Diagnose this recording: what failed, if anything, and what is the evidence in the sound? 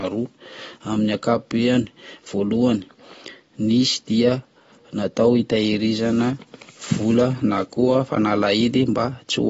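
Codec stage: nothing above 7.7 kHz throughout, plus plainly audible coding damage a clean low-pass wouldn't leave, likely AAC compression at about 24 kbps.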